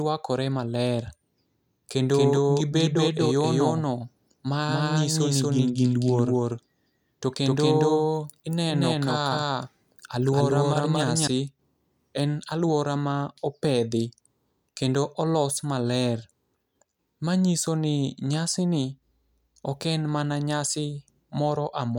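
From 2.14 s to 11.28 s the speech carries a doubled audio track: a second full-band copy trails the original by around 200 ms at roughly the same level. It has no decay or room colour, so it reads as a distinct slapback rather than reverberation, and it switches in and out abruptly at both ends. The likely cause is the signal being captured a second time through a slower path, or an edit leaving two offset copies stacked.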